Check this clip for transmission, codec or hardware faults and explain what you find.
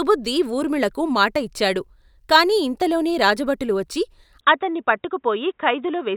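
One fault is present. From 4.41 s, right after "కాని ఇంతలోనే రాజుభటులు వచ్చి", to the end, the speech turns dull and boxy with nothing above 3.8 kHz. This is likely an input switched to a poorer device. The change is instant, with no gap, similar level, and a faint new noise floor far below the speech.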